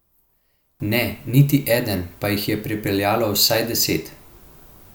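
From the start to 0.8 s the speech drops by about 20 dB when heard in mono. The likely cause is one channel inverted: with one stereo side's polarity reversed, the centred speech cancels on summing, leaving a faint trace.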